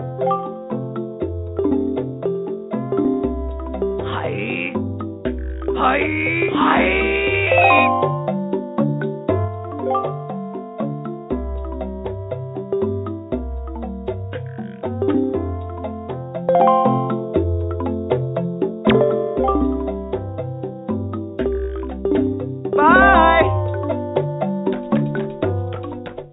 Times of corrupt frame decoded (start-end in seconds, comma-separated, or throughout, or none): none